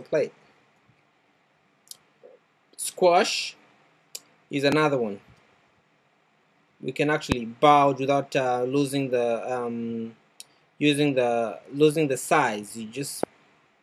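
Loud pops at 4.72, 7.32 and 13.23 s, about 15, 20 and 15 dB above the sound. Each is one sharp pulse, likely a voltage spike.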